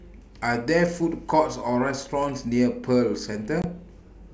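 From 3.62 to 3.65 s, packet loss on an ADPCM call leaves a hard-edged silent hole of about 20 ms, roughly a couple of packets. Unlike a plain dropout, the speech returns slightly distorted as the decoder's predictor and step size resynchronise.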